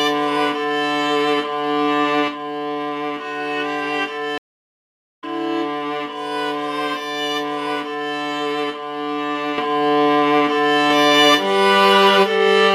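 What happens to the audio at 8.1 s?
Nothing goes wrong at 8.1 s; the audio there plays through intact, with no dropout, click, distortion or other fault.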